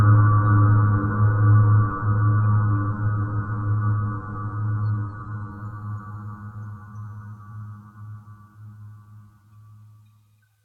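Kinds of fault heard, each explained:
Adaptive stream at a lower bitrate: from 1.51 to 5.51 s the treble abruptly disappears above 4.4 kHz and the sound turns duller and more smeared, then snaps back with no gap. A slowed connection forced a cheaper version, consistent with AAC dropping from 96 to 32 kbit/s.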